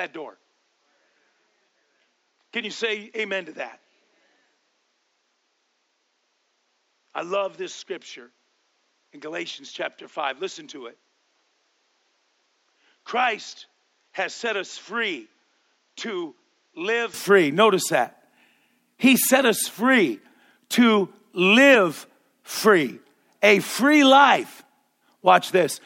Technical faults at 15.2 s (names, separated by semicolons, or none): input switched to a poorer device